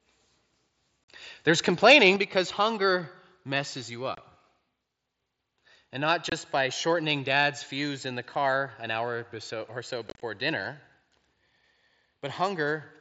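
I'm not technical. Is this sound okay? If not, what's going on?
No. At 1.05 to 1.09 s, around 4.15 s just after "because hunger messes you", around 6.30 s, and from 10.09 to 10.22 s after "an hour or so", the speech has sudden gaps. The last one sounds choppy and crackly. This is unconcealed Bluetooth headset packet loss: bits of audio between headset and phone went missing and were never filled in.

From 1.85 to 2.08 s the loudest parts sound harsh and crackly, likely microphone overload, with the microphone set so loud that the tops of the peaks were cut off.

At 2.16 s, just before "because hunger messes you", everything suddenly gets quieter. This is likely the microphone volume stepped down, with the call software turning the microphone down after that harsh moment.

The headset's mSBC Bluetooth codec adds only a light graininess.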